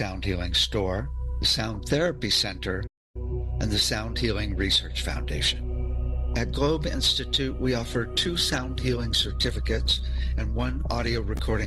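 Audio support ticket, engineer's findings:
Playback stall, 2.87 to 3.16 s. Output drops to silence for about 0.28 s mid-flow, then resumes. Likely cause: player starved of data or its output thread blocked, so the device buffer ran dry until refill. Check jitter buffer depth and thread scheduling.

Call bitrate drop, 7.56 s to end of clip. Sound turns coarse and muffled, high end gone, for the final 4.1 s. Encoder bitrate cut from 128 to 18 kbps after bandwidth estimate fell; Opus codes coarser, band-limits. No recovery before end. Check congestion control and estimator.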